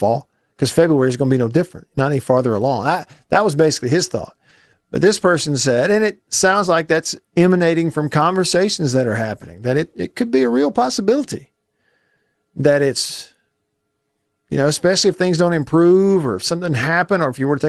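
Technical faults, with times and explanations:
6.51–6.53 s, lost packet rebuilt from error correction: between "person said and it" and "like that's emanating from", a 20 ms stretch sounds briefly rougher and noisier, which fits a single lost packet replaced by the low-bitrate copy carried in the next Opus packet. There is no gap, only a short coarse patch.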